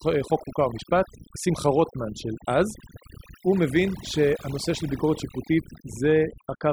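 Overdone noise removal runs throughout this speech recording: a noise reducer set far too aggressively pulls individual frequency bands down whenever they sit near its noise estimate, so the background drops and breaks up into twinkling specks, and quieter voice components vanish with it.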